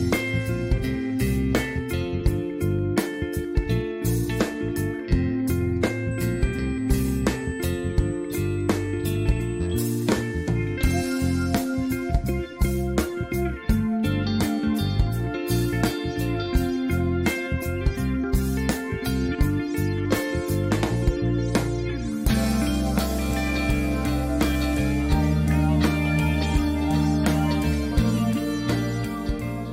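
From 6.11 s to 9.98 s a steady, fixed-pitch whine sits on the audio at 8 kHz, around 30 dB below the signal. This is USB whine: the bus schedules its traffic in 125-microsecond microframes, and the resulting current pulses couple into the audio path through shared power or ground, repeating 8,000 times a second. It is heard as a thin, high, unwavering tone.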